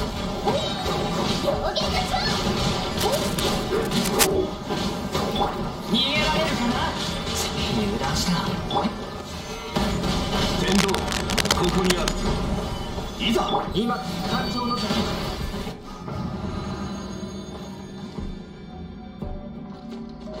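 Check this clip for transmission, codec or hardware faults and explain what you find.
Two bursts of cable scratch noise are present, from 2.94 to 4.32 s and again from 10.62 to 12.12 s. Each is a dense, irregular crackle laid over the sound: the first sits around 5 dB below it, the second is roughly as loud as the programme itself. The likely cause is a worn cable, connector or control being handled, so its contact resistance fluctuates rapidly and injects this rustling noise for as long as it moves.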